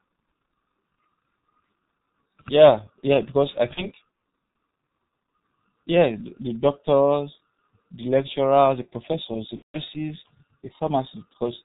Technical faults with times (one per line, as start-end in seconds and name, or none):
0.00-11.65 G.723.1 codec
3.74-3.88 VoIP packet loss concealed by the speech codec
9.56-9.79 VoIP packet loss concealed by the speech codec